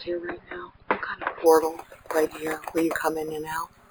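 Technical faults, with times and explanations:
1.46 s to the end, imaging from sample-and-hold upsampling: a bright, metallic fizz sits over the sound, rising and falling with its level, about 20 dB below it. Each sample was simply repeated to reach a higher rate, with no smoothing filter. The resulting staircase waveform mirrors the spectrum around multiples of the original rate, and the lowest copy, between 5.5 and 11 kHz, moves opposite to the pitch. This fits audio held at 11 kHz and stepped up to 44.1 kHz.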